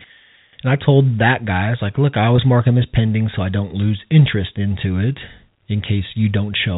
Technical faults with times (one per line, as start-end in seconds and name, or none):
2.36-2.38 packet loss with pitch repetition